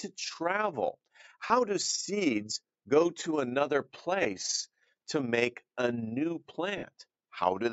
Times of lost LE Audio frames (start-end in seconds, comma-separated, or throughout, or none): 1.47-1.50, 4.23-4.25, 6.78-6.83